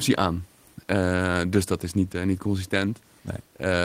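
The speech recording carries no technical faults, with only a faint room background sitting about 39 dB below the voice.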